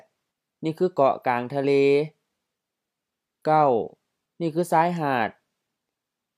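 No technical fault can be heard anywhere in the clip. There is nothing in it to place in time or trace to a cause.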